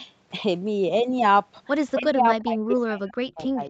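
At 1.95 s the far end's echo canceller likely let part of its loudspeaker pickup through: a brief echo leak, about 40 ms long, brings back a copy of the voice delayed by about 253 ms, faint at roughly 20 dB below the speech. From 1.98 s to the end, with both sides talking at once, the canceller likely could not tell its own talker from the echo and suppressed both, so the voice dips and drops out in pieces, sinking by as much as about 40 dB. At 2.70 s a second echo leak, again about 40 ms at a 254 ms delay, is faint at roughly 35 dB down.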